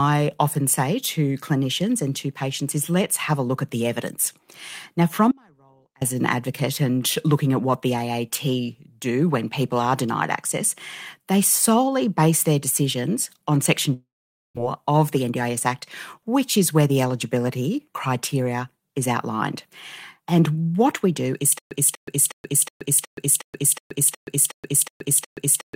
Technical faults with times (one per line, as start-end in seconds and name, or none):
5.31-6.01 audio dropout to a faint residue
13.93-14.59 long network dropout
14.63-14.97 jitter buffer slow-down
15.16-15.69 jitter buffer speed-up
21.58-25.75 stutter with silent gaps